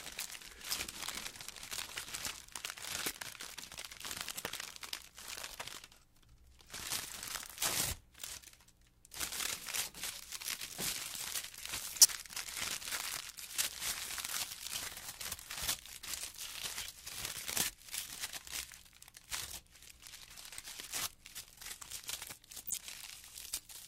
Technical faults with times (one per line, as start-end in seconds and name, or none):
8.21-8.24 corrupt frame decoded
11.98-12.09 corrupt frame decoded
22.67-22.78 corrupt frame decoded